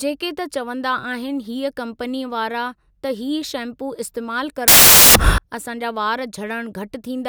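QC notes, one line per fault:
4.68 to 5.38 s, samples built from the wrong bytes: for about 0.7 s the speech gives way to loud, harsh broadband noise. The decoder is assembling each sample from misaligned or swapped bytes, so the rapidly fluctuating low-order bits land in the most significant position and dominate every value. The result is broadband hiss at high level until normal sample reconstruction resumes at 5.38 s.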